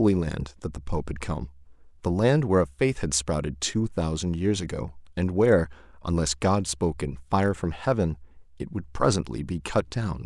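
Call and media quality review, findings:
No audible faults found in this speech recording.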